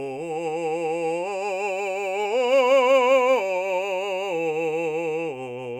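No technical faults can be heard at any point in the music.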